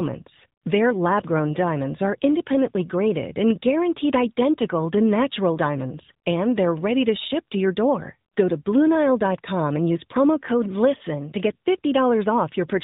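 Throughout, the speech has AMR narrowband mobile codec damage. Nothing passes above 4 kHz, and the voice sounds plainly buzzy and synthetic, which fits the 10.2 kbps AMR-NB mode.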